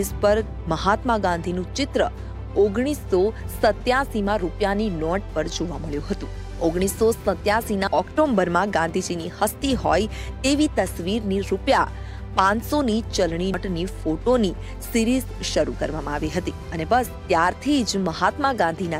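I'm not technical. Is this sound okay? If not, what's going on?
No. Compressed frames were skipped at 7.87 and 13.54 seconds: each time, a couple of chunks of the compressed file, each about 93 ms long, went missing or were rejected as damaged. The sound jumps ahead roughly a fifth of a second.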